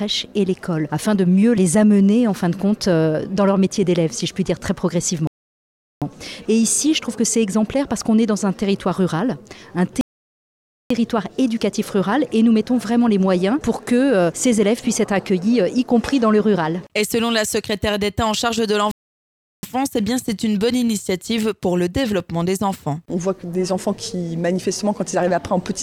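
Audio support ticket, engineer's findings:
Rebuffering stall, three times: 5.27–6.02 s (0.74 s), 10.01–10.91 s (0.89 s), 18.91–19.63 s (0.72 s). Hard cut to silence, playback resumes exactly where it stopped. Player buffer underrun awaiting download; no content lost, time added.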